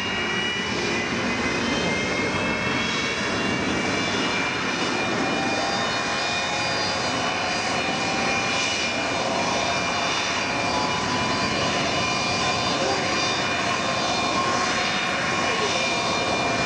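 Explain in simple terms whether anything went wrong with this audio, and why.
Nothing went wrong here; there's no glitch, dropout or other technical problem to point to anywhere in this audio.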